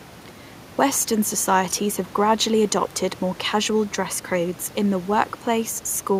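No technical faults heard.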